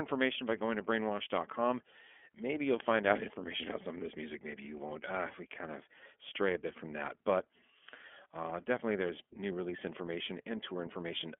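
Throughout the recording, the speech passed through an iLBC codec, a narrowband VoIP coder that rebuilds each block of excitation on its own instead of borrowing from the previous one. The coarse texture fits its 13.33 kbps mode with 30 ms frames. The line carries only about 250 Hz to 3.4 kHz, so the speech sounds thin and boxed in, and the codec damage is plainly audible as a rough, slightly synthetic grain.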